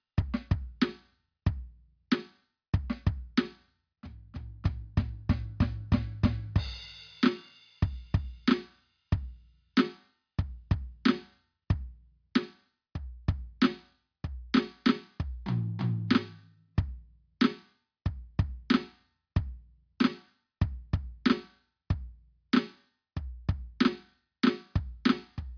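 No faults can be heard.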